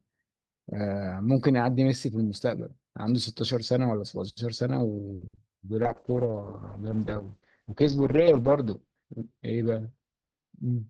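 Speech, with repeated packet loss (robotic sound) from 5.15 to 5.51 s: four short holes, the longest 60 ms, are patched by extending the preceding sound, so nearly half of that stretch is concealment and the speech turns choppy. From 5.82 s to the end, a call bitrate drop is audible. The coarser coding and a top end narrowed from about 20 kHz to 8 kHz make the speech watery and muffled, which fits a fall from roughly 48 kbps to about 7 kbps. The worst of it lasts about 2.5 s.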